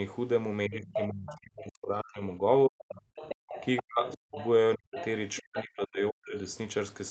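From 0.68 to 2.9 s, speech is likely suppressed in double talk: the echo canceller, unable to separate talker from loudspeaker echo, pulls the voice down by as much as roughly 40 dB, so it dips and breaks up. The same suppression returns at 3.81–4.37, 4.76–4.99 and 5.4–6.36 s. The other side's voice is likely leaking through at 1.27–1.39 s, faintly, around 15 dB below the speech; at 2.89–4.48 s, stronger, around 10 dB down; and at 4.97–5.4 s, again about 15 dB under. At 3.35–3.49 s the background is gated by the echo canceller, clamping the microphone by about 40 dB so the room sound briefly drops out.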